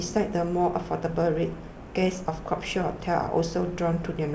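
Nothing goes wrong anywhere in this bit of speech; it simply sounds like ordinary call audio, with nothing above 8 kHz, which is just what a wideband call codec leaves behind.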